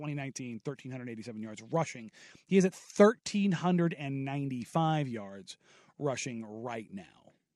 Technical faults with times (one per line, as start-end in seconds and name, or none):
none